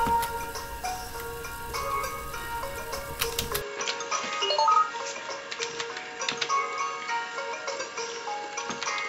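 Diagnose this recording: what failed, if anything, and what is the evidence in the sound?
At 3.61 s the input was likely switched to a poorer device, a driver-level routing change. From there to the end, nothing reaches above 7.6 kHz and a new noise floor sits roughly 35 dB under the signal, with no gap and no level jump. A codec bandwidth cut would narrow the band without bringing in different background noise.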